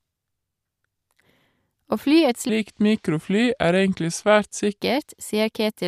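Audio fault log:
2.49–4.80 s, section at the wrong speed: right after "fly et" the speech drops to about 0.8x speed, so it drags and sinks roughly four semitones lower, then snaps back. Pitch and pace shift together, likely from this stretch being played against the wrong clock.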